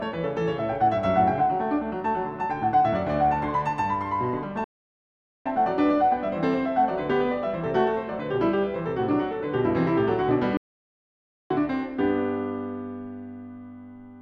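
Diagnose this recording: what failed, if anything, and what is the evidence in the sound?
The music cuts out twice mid-phrase: silence from 4.64 to 5.46 s, about 0.81 s, and again from 10.57 to 11.51 s, about 0.93 s. Each gap is plain silence. This is a playback stall at the player stage. The likely cause is that the player's buffer ran dry, or its output thread was blocked, so nothing reached the output until it recovered and resumed.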